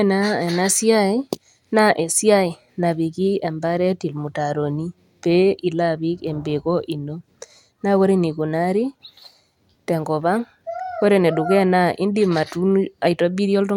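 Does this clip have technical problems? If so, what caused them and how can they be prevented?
No, this recording has no technical problems to fix.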